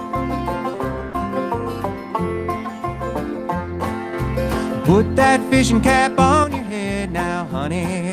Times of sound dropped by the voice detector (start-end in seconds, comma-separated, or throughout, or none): 1.09-1.13